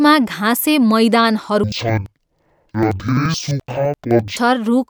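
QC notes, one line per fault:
1.64–4.41 s, interleaved audio read as planar. The speech drops an octave, sounds doubled and choppy at about 11.7 Hz. Each 85 ms block's left-right samples were split into halves and played together at half speed, which fits a 4096-sample block.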